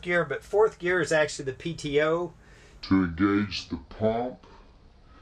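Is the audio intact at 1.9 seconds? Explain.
Yes, the audio is intact at 1.9 seconds, with no dropout, click, distortion or other fault audible at that point.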